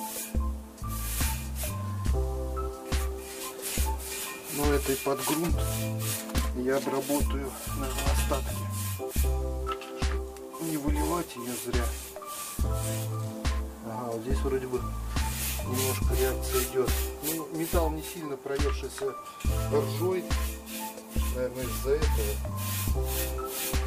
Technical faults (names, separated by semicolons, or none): none